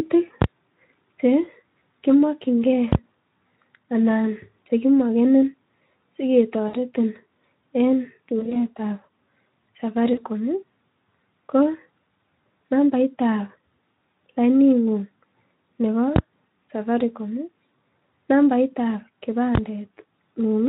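Very short, loud bangs hit at 0.42–0.44 s and 2.93–2.95 s. These are invalid numbers at full scale: a calculation produced infinite or invalid values, which were clamped to the extreme sample value for about 23 ms, which fits a 1024-sample processing block.

Around 6.67–6.77 s, 8.39–8.58 s and 10.13–10.20 s the speech smears into a fading buzzy tone or coloured noise and stays thin briefly afterwards. This is VoIP packet loss concealed by the speech codec. The decoder, Speex here with its light hoarseness, extrapolated pitch and filter over about 60 ms, then 80 ms scattered across 160 ms, then 40 ms of lost audio.

Identical full-scale bangs return at 16.16–16.18 s and 19.55–19.57 s.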